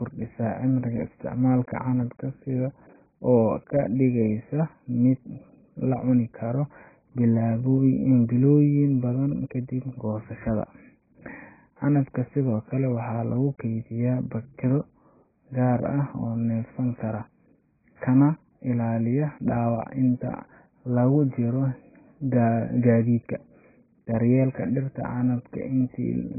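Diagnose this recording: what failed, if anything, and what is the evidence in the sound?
Codec stage: the speech is dull and smeared throughout, with nothing above 2.5 kHz. This is likely heavy AAC compression; a spectrogram shows a hard, flat ceiling there.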